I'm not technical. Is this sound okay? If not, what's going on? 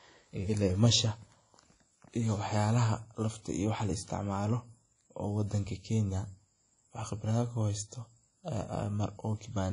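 No. Throughout the recording the speech has a washy, ringing quality, with a hiss that seems to swell and fade along with the voice, and the very top of the sound is missing, with nothing above about 10.1 kHz. The damage is plainly audible. This is most likely WMA compression, a way of shrinking audio files that, when squeezed too hard, smears its errors over short stretches of time and throws away the quietest detail.

At 5.01 s there is a sudden, very short snap laid on top of the speech, lasting only about a thousandth of a second. This is an electrical switching spike: a burst of electrical interference, likely from a nearby switch, motor or static discharge, that the recording equipment picked up and recorded as a click. It is separate from the speech itself and is not a problem with how anyone spoke.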